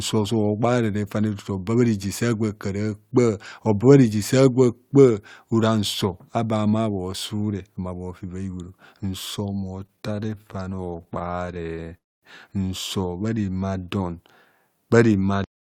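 Repeated stalls (stutter) run from 9.86 to 11.87 s. Packets kept reaching the receiver late, so its jitter buffer drained over and over, and each time it stretched the last sound to bridge the wait. The stalls are short, the longest about 24 ms, but there are dozens of them, adding roughly 375 ms of filler, about a fifth of that stretch. Nothing is lost, yet the speech drags and stutters unevenly.

A call audio freeze follows at 11.97 to 12.25 s. The speech stops for a quarter of a second, about 250 ms of it near-silent, and then resumes exactly where it left off, with nothing skipped. This is likely a burst of delayed packets that emptied the jitter buffer. The receiver had nothing new to play, so a gap of about 253 ms was inserted and the playback delay grew by the same amount.

A jitter buffer slow-down spans 13.01 to 13.98 s. With its reserve low, the receiver rebuilt it by repeating single pitch cycles and slivers of pause, adding about 154 ms. 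Over this second the speech plays at about 85% speed with its pitch unchanged. Sounds are drawn out.

A cut-off end comes at 15.44 s. The final buffers were never written out, so the speech halts mid-sound. It falls straight to digital silence with no natural decay, and an abrupt edge marks the stop.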